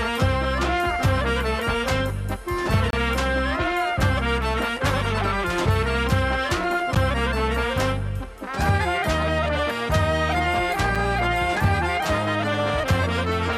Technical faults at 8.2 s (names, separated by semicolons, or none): none